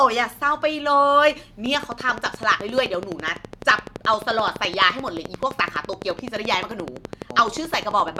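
From 1.66 s to 8.18 s, a pulse enters the signal path 11.7 times a second at even spacing, likely interference from nearby equipment or a faulty connection or power supply. The resulting train of clicks, around seventy, peaks roughly 10 dB above the speech and ticks steadily through pauses too.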